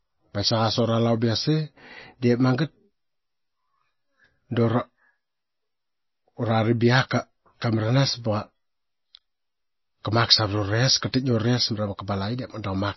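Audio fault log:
Throughout, MP3 compression: plainly audible watery, swirly smearing and no treble above 5.8 kHz, likely from a bit-starved MP3 encoder, which fits roughly 24 kbps. A spectrogram shows a flat ceiling at 5.8 kHz and weak detail flickering into patchy holes.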